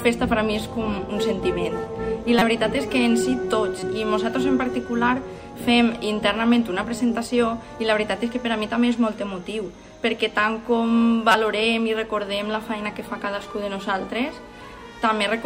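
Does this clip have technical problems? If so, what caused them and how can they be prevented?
Yes, there are three short bursts of corrupt frame decoded, at 2.39 to 2.42 s, 3.80 to 3.83 s and 11.32 to 11.35 s. Flipped bits in the compressed stream were played through rather than caught, so wrong gains and misread codes threw energy into the wrong frequencies and produced brief chirps, squeaks, blips or bursts of noise. The first and last are the loudest, and the middle one is much quieter. To prevent it, check each frame's integrity and conceal or drop damaged ones instead of decoding them.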